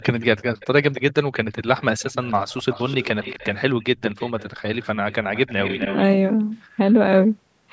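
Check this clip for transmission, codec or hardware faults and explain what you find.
One fault is present: echo leak. It occurs from 0.0 to 0.25 s, 0.6 to 1.13 s, and 1.58 to 6.03 s. A faint speech copy trails about 0.26 s behind, louder in the last stretch. A loudspeaker echo canceller likely let residual echo through.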